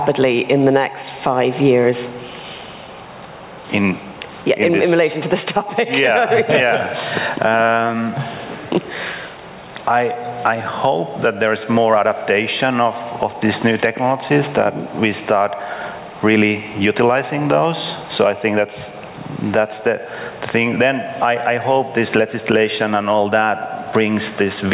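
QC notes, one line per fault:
Throughout: gain pumping. The level ducks by around 15 dB under each loud sound. Loud and soft parts sit close in level, so the sound is squashed. Likely cause: gain set too high, with a fast limiter pulling it down.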